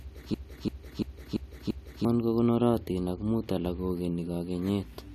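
From 0.34 s to 2.05 s the speech locks into a system hang loop: the host or driver stalled while the audio hardware kept replaying its ring buffer. The same 341 ms piece repeats five times at about 2.9 Hz, giving a slow, mechanical stutter rather than a buzz. That length fits a 16384-sample buffer at 48 kHz. About one and a half seconds of new audio never reach the output.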